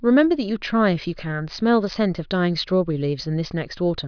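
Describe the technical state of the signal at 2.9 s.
At 2.9 s the audio is intact, with no fault to be heard at that point in the speech.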